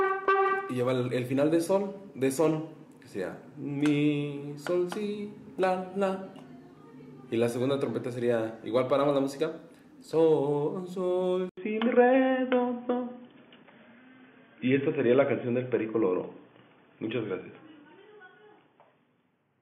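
At 11.49 s a gap of 80 ms falls, after which the sound stays boxy and band-limited to 3.5 kHz, steps in level by around 5 dB, and carries a faint new background. This points to the input likely switched to a poorer device, not a filter or codec, which would change neither level nor noise.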